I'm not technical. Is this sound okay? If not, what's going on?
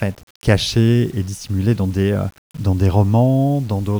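No. From start to finish the speech has a gritty, grainy roughness that rises and falls with the voice itself. It is most noticeable in the softer moments, where the sound turns coarse and the quietest bits seem to crackle or drop out. The likely cause is low bit depth without dither: the audio was stored with too few steps of loudness, roughly 7 bits, and simply rounded, so the rounding errors follow the voice as distortion.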